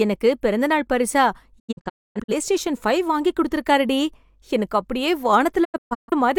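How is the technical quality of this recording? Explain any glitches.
The speech is broken twice by digital broadcast dropouts. From 1.58 to 2.34 s it drops out in several short holes, quickly fading to silence within about 20 ms. About 0.47 s is lost across roughly 0.68 s, and the longest gap is 256 ms. From 5.63 to 6.13 s a similar pattern loses about 0.34 s across 0.43 s, with gaps no longer than 128 ms. The receiver muted whenever incoming frames were corrupt or missing and resumed once valid ones arrived, so the speech sent during those holes is gone.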